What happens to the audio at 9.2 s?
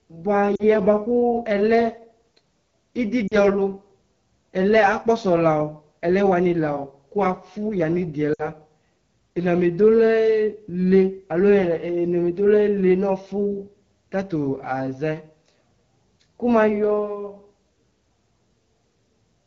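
At 9.2 s the speech sounds rough and raspy. It comes from the AMR wideband (HD Voice) codec, present throughout the clip: a low-rate vocal tract model codes up to 6.4 kHz, and shaped noise fills the band above. The plainly audible damage fits the 8.85 kbit/s mode.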